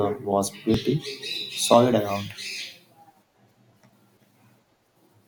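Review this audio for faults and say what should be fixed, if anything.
Short skips in the speech at 0.74 s, 1.74 s and 4.72 s. Each skip removes only a few milliseconds of sound. The audio on either side is joined directly, with no silence in between. The skips fall on a one-second grid. This is audio missing between chunks. The likely cause is a recorder or processor working in one-second blocks and dropping a sliver of sound each time it hands over from one block to the next. To prevent it, make the chunk handover seamless, using overlapping or double-buffered blocks so no samples are lost between them.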